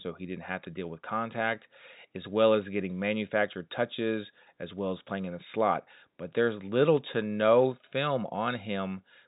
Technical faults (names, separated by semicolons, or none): none